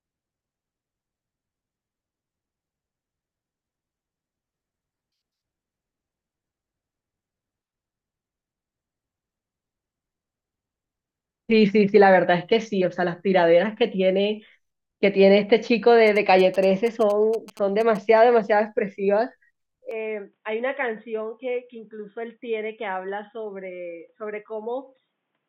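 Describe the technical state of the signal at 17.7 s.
At 17.7 s the speech is overlaid by GSM signalling bursts, running from 16.07 to 17.97 s. A nearby 2G phone exchanging short signalling messages emits clusters of radio bursts that the audio circuitry rectifies into sound, giving a galloping dit-dit-dit of brief buzzes at 216.7 Hz, roughly 20 dB below the speech. The stop-start clusters distinguish it from the steady 217 Hz drone of a phone in an active call, or from continuous mains hum.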